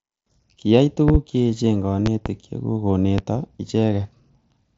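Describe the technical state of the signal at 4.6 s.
At 4.6 s the signal is intact with no fault, and the speech comes through the Bluetooth mSBC headset codec with its bandwidth ending just below 8 kHz and a light codec graininess.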